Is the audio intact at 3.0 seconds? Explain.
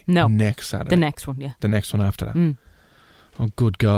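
Yes, the speech at 3.0 seconds plays through intact, with no audible dropout, click, distortion or other technical fault at that moment.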